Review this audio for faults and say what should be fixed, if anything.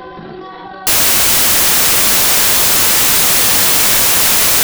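From 0.87 s right through to the end, the audio turns into loud, harsh broadband noise. That's samples built from the wrong bytes: the reader is pairing up each sample's bytes incorrectly, whether by a one-byte offset, swapped byte order or a wrong alignment assumption, so the jittery low bits land in the high part of every value. To prevent it, make the decoder take its byte order and frame alignment from the stream header instead of assuming them.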